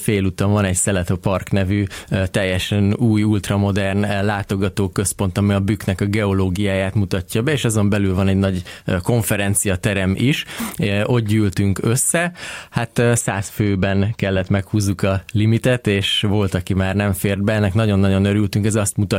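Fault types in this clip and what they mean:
Channel delay (comb filtering): from 13.21 to 14.59 s one channel trails the other by a tiny offset, around 0.05 ms, which fits a lag of about two samples. When the two are summed to mono, what they share cancels, so the top end turns dull. A spectrogram shows a fixed dark notch band near 10 kHz across that stretch. The waveform loses some fine high-frequency detail there.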